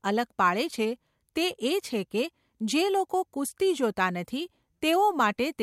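Listening through the speech, nothing stood out as a technical fault.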